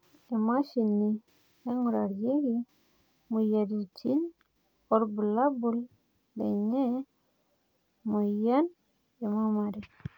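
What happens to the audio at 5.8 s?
Nothing goes wrong at 5.8 s: the speech carries on intact through that moment, with no dropout, click or other fault.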